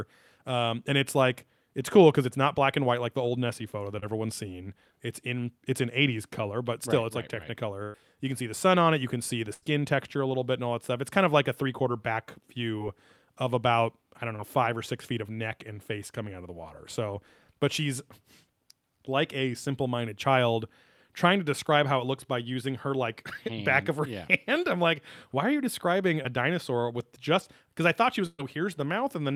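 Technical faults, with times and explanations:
3.99–4.08 s, 12.78–12.82 s, 14.36–14.41 s, 26.23–26.26 s: short concealed packet loss. About 20 ms of audio arrived too late each time, so the receiver extended the preceding sound, leaving a brief smear or wobble.
7.83–7.96 s, 9.54–9.64 s, 28.26–28.41 s: burst of packet loss. Between 80 and 120 ms went missing, so the last sound stretches into a fading buzz or hiss. The final gap ends in roughly 20 ms of silence before the speech resumes further on.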